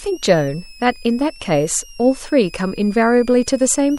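Throughout the speech a switching supply whistle sits underneath, a thin high tone wandering between 2.3 and 3.0 kHz, roughly 25 dB below the speech. A power converter is cycling at audible rates. The spectrogram shows a drifting horizontal line.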